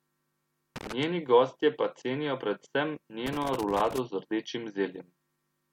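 A worn or dirty contact somewhere in the signal chain is making and breaking as it shifts, so the speech is repeatedly chopped. The result is loose connector crackle: an irregular scratchy burst from 0.76 to 1.03 s, ending just before "gostje pa", and a longer one from 3.26 to 3.98 s, running up to "z rdečim". Each burst sounds ragged and uneven rather than like steady noise.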